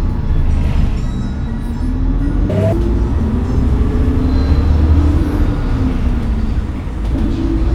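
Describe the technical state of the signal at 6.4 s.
At 6.4 s the signal is intact, with no audible fault at that moment.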